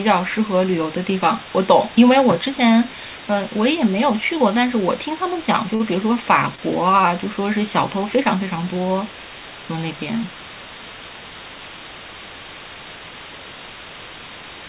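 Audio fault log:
Throughout: low bit depth with dither. A loud, perfectly even hiss sits only slightly below the speech, which fits roughly 5-bit rounding with dither turning the error into steady white noise. Unlike plain truncation, there is no grainy distortion that follows the signal's level.
5.75–5.83 s and 6.56–6.61 s: short stall from a late packet. The sound is held for about 45 ms and then about 30 ms. The jitter buffer ran dry and stretched the last sound, then resumed without losing anything, unlike a dropout gap. The 4 kHz call bandwidth can be heard around both.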